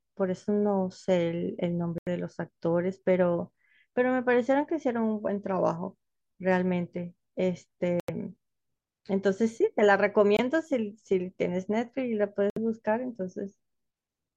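Speech, with four short holes of silence. They fall at 1.98–2.08 s, 8.00–8.10 s, 10.37–10.40 s and 12.50–12.58 s. Each gap cuts in abruptly or with a fade of a few milliseconds, and the speech resumes further on, as if it kept playing. This is likely Bluetooth dropout, where late packets get discarded.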